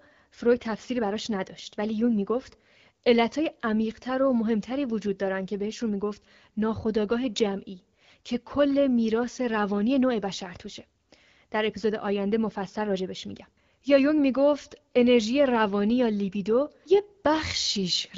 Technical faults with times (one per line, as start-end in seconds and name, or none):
none